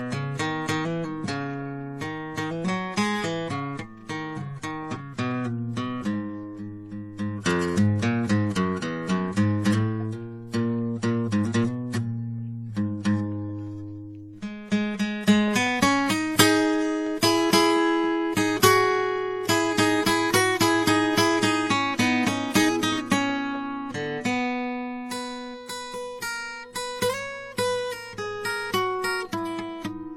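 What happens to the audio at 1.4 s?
At 1.4 s the music carries transcoding between lossy codecs, present throughout the clip: layered smearing and swirly, warbling artefacts sit together, with nothing above 18.4 kHz. This is likely from a chain of successive lossy encodes, each re-coding the previous one's artefacts and adding its own.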